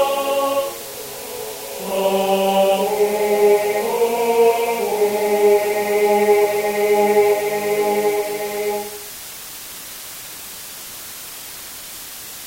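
From start to finish the audio carries low bit depth with dither: only 5 bits, with dither added before rounding, so the error becomes a constant, even hiss about 15 dB below the signal without harsh distortion. A spectrogram shows a flat noise floor filling every frequency, and the waveform looks thickly fuzzed.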